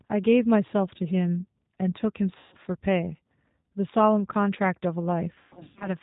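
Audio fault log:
throughout G.729 codec: band-limited below 4 kHz with a rough, synthetic buzz that fits an 8 kbit/s model-based speech codec rather than plain low-pass filtering or MP3 smearing.
2.38–2.57 s and 5.34–5.95 s VoIP packet loss concealed by the speech codec: About 140 ms of audio is lost in the first gap. In the second, 340 ms of loss is scattered over roughly half a second, with the longest run about 130 ms. The decoder stretches the last pitch and filter into a fading buzzy tone or coloured noise, and the speech stays weak as it recovers. Unlike dropouts to silence, the sound is filled in rather than left empty.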